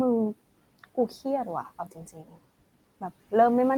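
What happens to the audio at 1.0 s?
At 1.0 s the sound falls inside a stretch of speech cut by the noise suppressor, running from 0.79 to 1.22 s. The suppressor misjudged parts of the speech as background and attenuated them along with the room noise, which sits about 24 dB below the speech. The gain dips reach about 17 dB at their deepest and add up to around a tenth of a second, leaving soft sounds in that span swallowed and faint.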